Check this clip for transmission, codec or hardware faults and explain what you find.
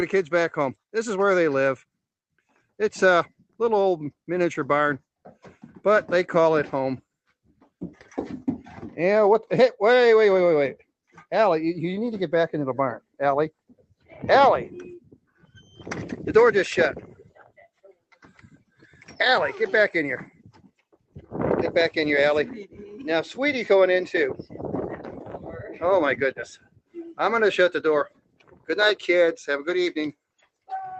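The clip has one kind of fault, repeated six times: sound cut by the noise suppressor, at 13.59–14.12 s, 15.01–15.78 s, 17.2–17.58 s, 20.31–21.3 s, 26.57–26.96 s and 28.09–28.69 s. The suppressor mistakes steady or decaying sound for noise and pulls it down by up to about 18 dB (about 10 dB at 17.2 s), each time for a fraction of a second. Unlike packet loss, the level sinks rather than dropping to silence, and sudden onsets survive. The call path runs through the Opus codec, with content above 8 kHz removed and a coding texture consistent with a bitrate around 20 kbps.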